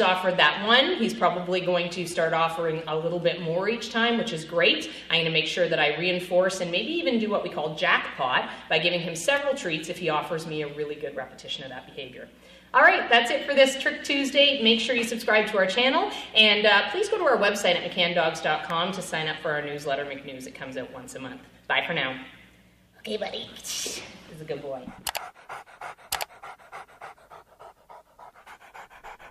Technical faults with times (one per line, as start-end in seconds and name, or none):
9.37 electrical switching spike
18.70 electrical switching spike